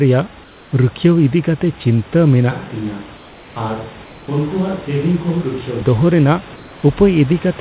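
From 0.44 to 0.71 s, just before "ᱨᱩᱠᱷᱟᱹᱭᱤ ᱤᱫᱤ", the room background drops out and a flat, featureless hiss about 2 dB quieter sits in its place. That's comfort noise in place of the background, likely from discontinuous transmission filling the pause. The same swap happens again at 3.17 to 3.56 s and 6.56 to 6.83 s.

At 2.52 s the sound abruptly turns roomy and hollow, loses bass, falls about 5 dB and picks up more background. This is a switch to a distant microphone, likely after the close mic dropped out, and it snaps back at 5.81 s.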